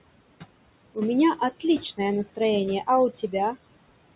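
Noise suppressor artifacts run through the whole clip. The suppressor estimates which frequency bands hold steady background noise and pulls them down frame by frame, here by about 21 dB. The room noise, which sits about 17 dB below the speech, sinks away in the gaps and rises again underneath the talking, so the background seems to switch on and off with the speech. All of this sits within a band that stops at 4 kHz, which fits G.711 A-law at 64 kbps.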